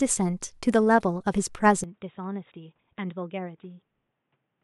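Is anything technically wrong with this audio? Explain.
Yes. From 1.84 s to the end, the speech turns dull and boxy, with nothing above 3.8 kHz, a level drop of roughly 10 dB and a faint new background noise, with no gap at the change. This is likely an input switched to a poorer device. A plain bandwidth cut would not also change the level and noise floor together.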